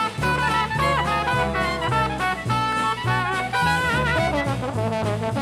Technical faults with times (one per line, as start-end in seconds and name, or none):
2.72 block of digital silence